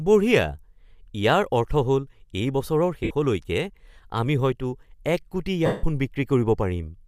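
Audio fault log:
3.03 to 3.11 s and 5.66 to 5.84 s, lost LE Audio frames: two dropouts, about 68 ms and 173 ms long, which fits roughly nine and then twenty-three 7.5 ms frames going missing. The decoder covers each gap by replaying the last spectrum with scrambled phase, so the speech smears into a hissy blur. The longer gap fades down toward silence before the signal comes back. The light graininess around it is likely just the LC3 link at its usual setting.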